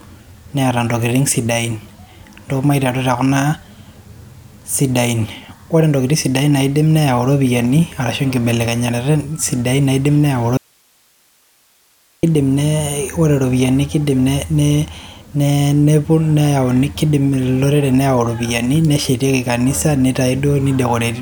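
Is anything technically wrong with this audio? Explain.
Yes. From 10.57 to 12.23 s the speech drops out for about 1.66 s, leaving only faint hiss roughly 40 dB below the signal: an audio dropout to a faint residue. The likely cause is the source breaking while the path stayed live. The abrupt cut and return tell it apart from a natural pause or fade.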